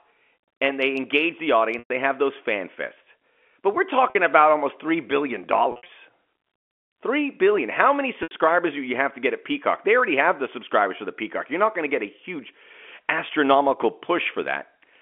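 At 1.79 to 1.90 s, right after "and they engage the", there's packet loss with pitch repetition: about 110 ms went missing, and the receiver looped the last pitch period, which is why you get that held, buzzy tone fading out before "have those fan fests". A 50 ms gap at 4.10 s, just before "about almost", sounds like a brief frozen note. Around 5.72 to 5.88 s the losses are scattered, 130 ms across 160 ms with a longest run of 60 ms, giving short held, buzzy notes. Then 80 ms at 8.23 to 8.31 s, before "do you have to", all over the narrow telephone band.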